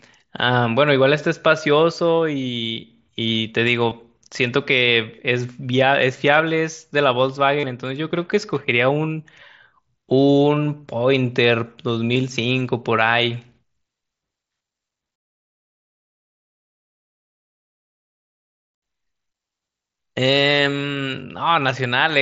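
At 3.9 s, 7.59 to 7.64 s, and 12.14 s, voice packets between the headset and phone were dropped, giving concealed Bluetooth headset packet loss. The receiver filled each gap by repeating the best-matching recent stretch of waveform. The two short gaps of about 15 ms each cover two lost frames. The longer gap of about 37.5 ms, which fits five lost frames, holds a brief buzzy tone at full level and then warbles slightly as real audio resumes, all within the narrowed band of the mSBC headset codec.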